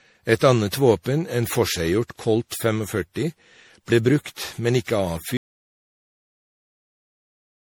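From the start, the speech has a swirly, hollow, smeared quality, with consonant attacks blurred and a watery noise floor. This is generation loss, likely from the audio being decoded and re-encoded around seven times as MP3 at roughly 64 kbit/s, each pass adding fresh quantisation errors and spectral gaps.

At 5.37 s the sound cuts out abruptly mid-flow and stays silent, with no room tone, through to the end of the clip. This is an audio dropout to silence, likely from the input being lost while the recorder kept writing zeros.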